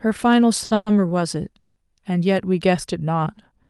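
Speech passed over a call link with a short stall from a late packet at 0.64 to 0.72 s, where about 60 ms of one sound is held too long with a faint buzz or dip. On a spectrogram this shows as horizontal smearing, and the timing slips by 60 ms with nothing lost. Two call audio freezes follow, at 0.74 to 0.88 s and 1.59 to 1.78 s, adding 120 ms and 170 ms. Each is likely caused by held-up packets draining the jitter buffer. The last sound is continued as a fading buzz or hiss rather than silence, appearing as a decaying, featureless band on the spectrogram and a shrinking envelope on the waveform before speech resumes where it stopped.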